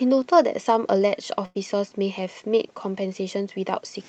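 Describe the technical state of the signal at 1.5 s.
At 1.5 s there is a burst of packet loss, running from about 1.45 to 1.57 s. Roughly 100 ms of the speech never arrived in time to be played. The receiver filled about 96 ms of that hole by stretching the last sound it had and fading it down. So a voiced sound turns into a held buzz, and other sounds into a dying hiss. Speech then picks up further along, with that stretch skipped.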